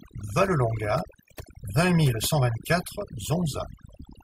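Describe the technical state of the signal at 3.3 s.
At 3.3 s the background has dropped and broken up into twinkling specks. This is overdone noise removal, present throughout the clip: an over-aggressive noise reducer cuts frequency bands near its noise estimate, taking quiet speech detail with them.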